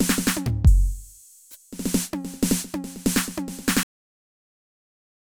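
At 3.83 s the music has a cut-off end: the final buffers were never written or played, so the sound stops mid-note and falls straight to digital silence through 5.28 s. The waveform flatlines abruptly with no decay tail, and the spectrogram shows every frequency ending on one vertical edge.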